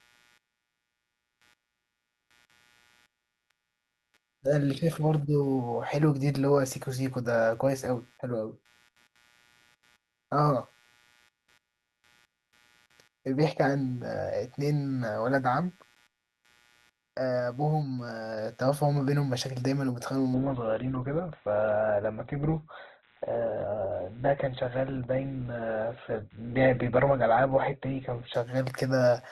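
Computer activity noise runs through the whole clip: a buzzing, scratchy pulse repeating at around 100 times per second, sitting roughly 35 dB below the speech. As the processor, graphics card or mouse change their load, the current they draw shifts the ground that the audio circuit shares with them. That shift leaks into the signal as interference. It rises and falls with what the computer is doing, not with the speech.

From 20.34 s to 28.34 s, the adaptive stream is at a lower bitrate. When the connection slowed, the player switched to a leaner encoding, which fits a step down from Opus at about 64 kbit/s to about 12 kbit/s. The change is abrupt but leaves no gap. Across those eight seconds nothing is left above 4.2 kHz, so the speech loses its treble and takes on a duller, artefact-laden quality.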